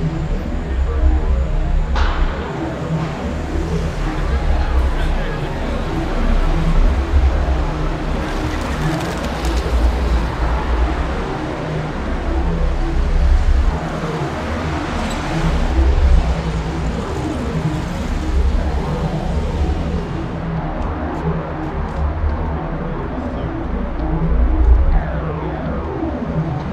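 No audible faults: no dropouts, glitches or level problems at any point.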